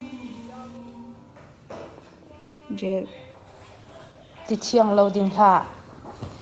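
A speech recording carried over a call, with everything above 8 kHz absent throughout, which fits an Opus stream running at 48 kbps. From 2.39 to 2.63 s there is a call audio freeze: the last sound is stretched into a fading hold for about 220 ms, then the speech resumes exactly where it left off, with nothing lost but everything after it pushed later by 220 ms. The likely cause is packets stalling in transit and the jitter buffer running dry. On a spectrogram this shows as smeared, decaying horizontal bands. The waveform shows a tapering envelope instead of a clean gap.

Shortly after come two short concealed packet losses, at 2.79 to 2.83 s and 2.87 to 2.91 s. In each, about 20 ms of real audio never arrived in time. The decoder papered over the hole by extrapolating the preceding sound and then crossfading back. The result is a quick smear or wobble. On a spectrogram it appears as a thin vertical slice where the fine texture goes blurry or briefly repeats.

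From 3.28 s to the end, a call bitrate drop takes the encoder from 48 kbps down to 13 kbps, and it stays at that lowest rate for about 1.7 s. The bandwidth estimate collapsed and Opus was forced to code far more coarsely, so the speech turns rough and watery. A spectrogram shows blockier, grainier harmonics and a thinner upper band from that point on.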